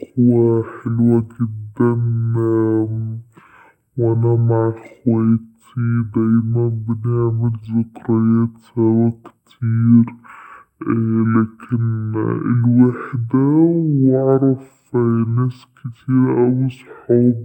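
From start to finish the speech runs at half speed and an octave low, the sign of stereo read as mono: interleaved left and right samples play back as one channel. A spectrogram shows harmonics compressed downward, plus a fainter mirrored copy in the upper half.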